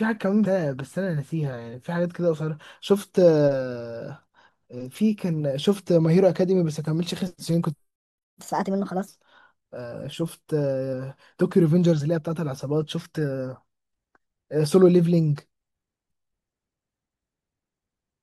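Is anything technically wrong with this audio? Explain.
Yes, three faults can be heard.

At 1.73 s, compressed frames are skipped. The audio jumps ahead by about a tenth of a second, which fits roughly four 21.3 ms frames.

From 7.96 to 8.18 s there is a playback stall. The sound cuts to silence for 224 ms mid-flow, likely because the player ran out of data.

From 8.18 to 9.08 s, catch-up at higher speed follows. The backlog is resampled at 1.25 times normal speed, raising pitch about four semitones.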